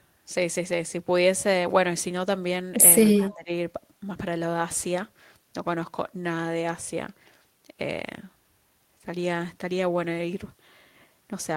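A speech recording with two overlapping faults around 3.2 s. From 3.15 to 3.34 s a faint copy of the talker returns about 182 ms late, an echo leak, likely from a loudspeaker echo canceller letting residual pickup through. From 3.18 to 3.5 s the voice dips by roughly 15 dB, losing about a third of a second, which is speech suppressed in double talk, likely because the canceller could not separate the talker from the echo.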